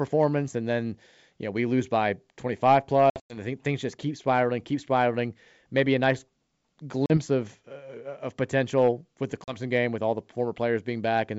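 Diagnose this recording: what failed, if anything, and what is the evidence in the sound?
Packet loss on an ADPCM call, a network fault: 160 ms dropped across 3.10–3.37 s (longest gap 100 ms), plus 40 ms at 7.06–7.18 s and 9.44–9.57 s. The waveform shows hard-edged flat holes, and the spectrogram shows full-band blank columns. Desynchronised predictor and step size make sound resume slightly distorted before it settles.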